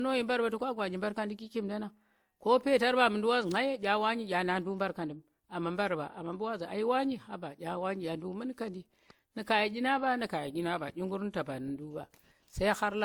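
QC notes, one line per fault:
Throughout, transcoding between lossy codecs: the speech was likely encoded twice, with an earlier WMA-style encoding re-coded through Opus. The second encoder spends bits on the first one's artefacts, so two layers of coding smear are heard together, with nothing above 20.2 kHz.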